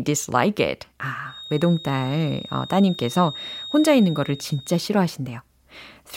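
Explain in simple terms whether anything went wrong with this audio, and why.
From 1.23 to 4.91 s, a feedback whistle: a thin, steady 3.7 kHz tone that stays faint rather than howling, likely from a speaker-to-microphone loop.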